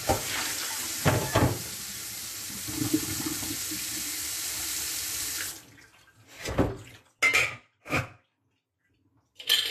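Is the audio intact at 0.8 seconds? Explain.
No, and it isn't just that moment. The whole clip carries what's likely Vorbis compression: nothing above 14.2 kHz, and the treble is quantised so coarsely that fine detail turns to hiss and grain, with blurred attacks, which fits a low bitrate around 34 kbps.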